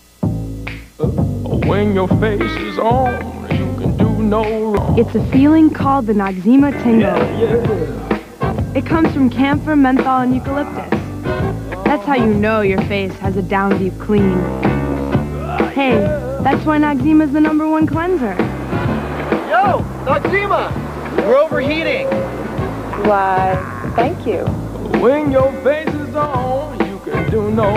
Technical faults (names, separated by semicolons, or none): one channel drops out